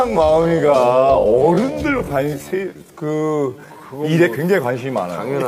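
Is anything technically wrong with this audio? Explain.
Yes. From 0.0 to 3.82 s there is a time-stretched section. Software likely slowed this part to about 0.61 times its original speed, holding the pitch steady by repeating short slices. The passage drags, and the pace snaps back to normal abruptly at 3.82 s.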